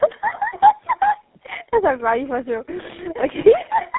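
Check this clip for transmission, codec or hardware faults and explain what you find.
There is one fault, present through the whole clip: tandem speech coding. The speech passed through three speech coders in a row, with decoding and re-encoding at each boundary, so every stage compounded the previous stage's damage. The sound is rough, muffled and warbly, and the final stage fits GSM full rate. On a spectrogram, nothing appears above about 3.8 kHz, and the harmonics look smeared and blotchy rather than cleanly striated.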